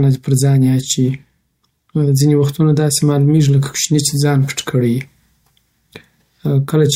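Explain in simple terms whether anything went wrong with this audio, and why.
Nothing went wrong with this speech recording that a listener can hear. The sound stays steady throughout, with no interruptions, dropouts or sudden changes.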